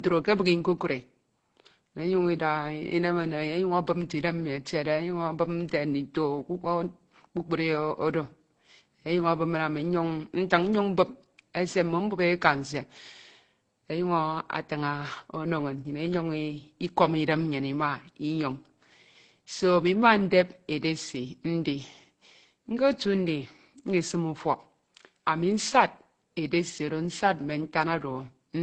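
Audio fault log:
Throughout, transcoding between lossy codecs: the speech likely passed through a low-rate Opus stage and then AAC-LC. Their artefacts stack, and a spectrogram shows nothing above 9 kHz.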